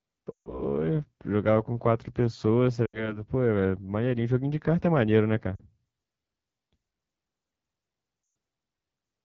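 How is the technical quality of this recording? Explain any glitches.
The technical quality is poor. The whole recording is held back by plainly audible codec coloring, and four short dropouts break up the speech.

AMR wideband (HD Voice) codec, throughout: The speech is plainly rough and raspy. This fits AMR-WB at a very low rate, around 8.85 kbit/s. The codec rebuilds speech below 6.4 kHz from a pulse-excited vocal tract model. At this rate it has too few bits to do that cleanly. The band above 6.4 kHz is only shaped noise.

Lost AMR speech frames, at 0.31 to 0.62 s, 2.85 to 3.21 s, 5.56 to 5.64 s and 8.23 to 8.35 s: Each gap sounds like the voice quickly dropping to near silence. The decoder is concealing damaged frames. It repeats the last good pitch and vocal tract settings at falling gain. The longest losses, about 140 ms and 120 ms, drop to near silence. The shortest, about 40 ms, spans two frames. 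Speech returns weak or rough.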